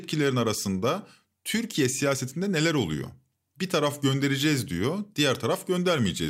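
Nothing here trips the ear, no dropouts, glitches or distortion turn up anywhere in this bit of speech.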